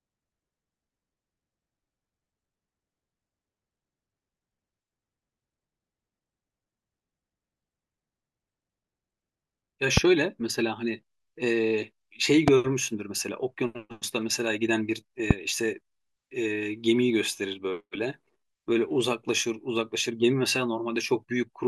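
Three loud pops cut through the speech at 9.97–10.00 s, 12.48–12.50 s and 15.31–15.33 s. Each is a single sharp crack, roughly 20 dB above the speech, which carries on underneath. A sudden electrical voltage pulse is likely the cause. On the waveform each shows as a tall isolated spike, and on the spectrogram as a thin vertical broadband stripe.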